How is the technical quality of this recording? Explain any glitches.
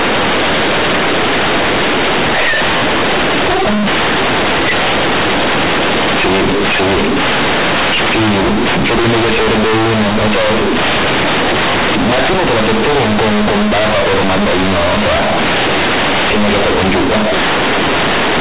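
The quality is badly damaged: from start to finish the speech comes through as very loud, harsh, buzzy distortion, with heavy noise filling the pauses where there should be near silence.

The fault throughout is companded audio read as linear. The audio was encoded with G.711 A-law telephone coding at 8 kHz, so the band stops at 4 kHz, but the A-law bytes are being played back directly as linear 8-bit samples without the expansion step. Because A-law packs its values logarithmically, small and large signals end up at similar output levels, and every crossing through zero flings the waveform across roughly half the full range. Quiet passages and gaps are blown up into loud noise, and the speech itself is bent into a grating, distorted buzz.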